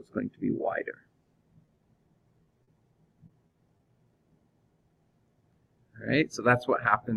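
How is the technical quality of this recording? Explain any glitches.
The recording is marred by packet loss in the middle of the clip, first as isolated dropouts and then as a dense burst.

Short concealed packet loss occurs at 1.65–1.69 s, 1.75–1.79 s, 2.43–2.47 s and 2.63–2.69 s. Audio data failed to reach the decoder in time, and the receiver covered each hole by extending the preceding sound before blending back into the real signal. The first three patches span about 20 ms each and the last about 40 ms, so each is heard as a brief smear or wobble.

Repeated packet loss, heard as a robotic sound, runs from 3.27 to 3.87 s. Throughout this stretch, packets kept going missing, producing five short holes of up to 20 ms each, about 100 ms in total and roughly a sixth of that span. The concealment stretches the last sound into each hole, and the next hole follows soon after. The result is a choppy passage with small pieces missing.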